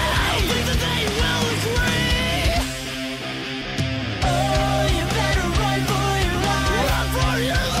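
At 3.61 s there is a skip ahead: playback jumps forward with no gap, and roughly a second of audio is missing. The stretch was dropped while later audio was already queued, either in transit or by a jitter buffer discarding a backlog, and nothing was inserted to cover the loss. The sound before and after the jump is butted together almost directly, so the material changes abruptly mid-flow, and the clip's timing runs about one second ahead from that point.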